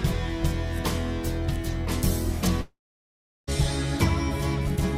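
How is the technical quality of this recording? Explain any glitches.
The recording has one clear glitch, a gap of close to a second in the middle.

Long network dropout, 2.61 to 3.49 s. The likely cause is that a run of audio, about 860 ms, never reached the receiver, which tried to cover the hole. The last sound before the break carries on briefly as a fading buzzy hiss for roughly 140 ms, then about 720 ms of silence follows. The audio resumes at 3.49 s, with the missing stretch simply absent.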